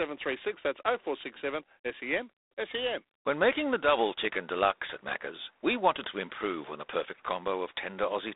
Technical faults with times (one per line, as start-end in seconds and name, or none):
0.00-8.35 G.726 ADPCM